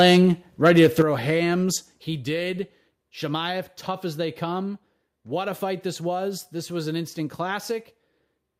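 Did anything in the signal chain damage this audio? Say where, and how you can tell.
Yes. Microphone overload at 0.00–0.25 s and 0.65–1.02 s, at the converter stage: peaks run about 5 dB and about 3 dB past full scale, with roughly 5% and 4% of samples flattened. That gives the loudest syllables a harsh crackle, likely from excessive input gain.

Microphone volume stepped down at 1.02 s and again at 2.04 s, in call processing: voice and background drop together, first by about 8 dB, then by about 4 dB. The first step follows the overload directly, fitting software that likely lowered device gain after detecting clipping.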